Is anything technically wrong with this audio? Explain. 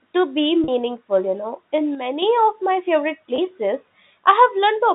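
Yes. There are two kinds of fault.

Packet loss with pitch repetition occurs at 0.64 to 0.68 s and at 3.36 to 3.38 s. Roughly 40 ms and then 20 ms of audio go missing. The receiver bridges each gap by repeating the last pitch period. Each one sounds like a brief held, buzzy note.

From 1.95 to 2.22 s, the level drops abruptly by about 6 dB and then recovers. The likely cause is one channel dropping out before the stereo signal is summed to mono.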